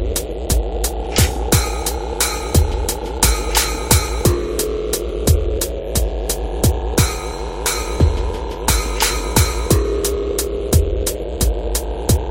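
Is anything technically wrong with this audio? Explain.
No, nothing technically wrong turns up anywhere in this recording.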